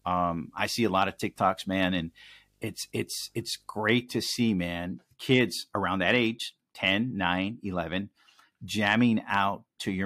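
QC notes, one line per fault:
0.00–3.82 s, video or display buzz: low 50 Hz field-rate buzz with hash and a faint 15.6 kHz line tone, from display cabling coupling in; clears before "to see man kids".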